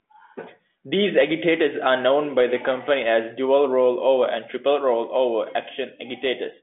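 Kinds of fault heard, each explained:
Nothing here counts as a fault: it's telephone-band speech that simply stops at about 3.7 kHz, which is just how the line carries it.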